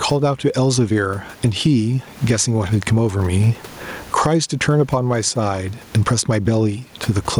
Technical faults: gain pumping

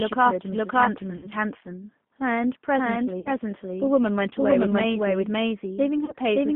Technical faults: doubled audio track; G.729 codec; VoIP packet loss concealed by the speech codec

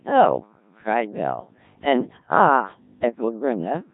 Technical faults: Codec 2 vocoder

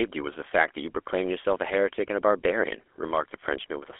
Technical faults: GSM full-rate codec

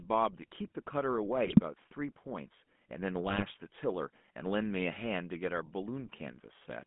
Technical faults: GSM full-rate codec; GSM bit errors

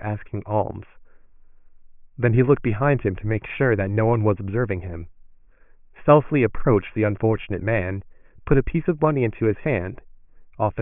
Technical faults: none

